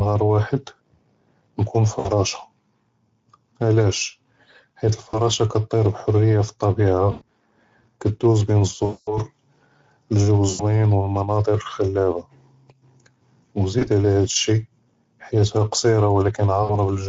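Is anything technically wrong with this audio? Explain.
Yes. Throughout, the speech passes through the Speex codec at a middle setting, which fits a bitrate near 16.8 kbps. With too few bits for the excitation signal, the voice comes out plainly noisy and hoarse, and the top band is a shaped hiss rather than real detail.

There is VoIP packet loss concealed by the speech codec at 1.99–2.09, 5.09–5.21, 7.11–7.24, 8.85–9.18, 10.49–10.64, 13.79–13.88 and 16.63–16.74 s. The decoder fills each gap from its last pitch and filter with fading gain. The sound smears into a buzzy tone or coloured noise that fades, and stays weak just after each gap. The longest gap is about 220 ms at 8.85 s.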